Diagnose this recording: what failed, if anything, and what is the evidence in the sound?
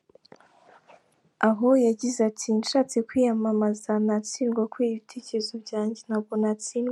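Nothing failed; no faults heard.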